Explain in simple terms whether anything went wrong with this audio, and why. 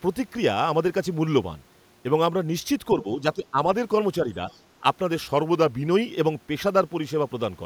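Two things go wrong in this speech clip.

From 2.98 to 3.58 s the talker gets pushed down in bits, adding up to about a third of a second, and at its worst the voice drops quite noticeably rather than vanishing. That's speech suppressed in double talk. The likely cause is someone on the far end talking at the same moment, so the echo canceller couldn't tell the talker apart from its own loudspeaker's echo and turned everything down to be safe.

Then from 5.33 to 5.87 s the audio suddenly plays about 5.6% slow, so the voice sags roughly a semitone flat, and after about half a second it snaps back to normal. That's a drift correction step. It's likely software keeping two devices' clocks in sync, which changed the playback rate in one jump to rebalance its buffer instead of easing into it gradually.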